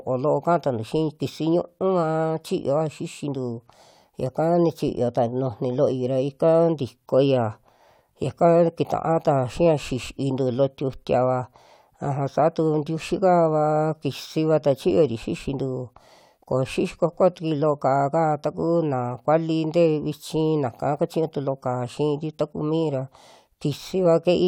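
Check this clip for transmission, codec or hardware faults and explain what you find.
One fault turns up in the speech: a compressed frame is skipped at 10.06 s. Roughly one frame of audio, around 20 ms, is never played, either because it's missing from the stream or because the decoder rejected it as corrupt. The frame length here is 21.3 ms, so the sound jumps forward by about that much.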